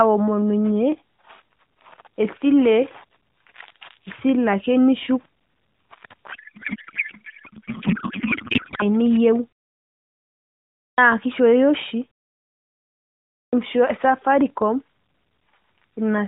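From 6.32 to 8.84 s, a codec payload misread replaces the speech with garbled warble that barely tracks it. The fit points to octet-aligned AMR being unpacked as bandwidth-efficient. Unlike dropouts, the signal never goes silent; it stays wrong until the packing matches again.

At 10.88 s, after a pause of about 1.4 s, a clipped start after a pause swallows about 99 ms, so "kishooyo oshi" begins abruptly. The same happens at 13.44 s, losing about 89 ms after a similar pause. Unlike muted pauses, which only quiet the silence, here the sound's onset itself is missing.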